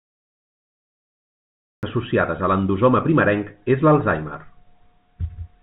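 From 0 to 1.83 s the clip sits in digital silence, then the speech bursts in mid-sound: a cut-off start, abrupt with no fade, unlike a noise gate's gradual opening, through narrowband telephone coding.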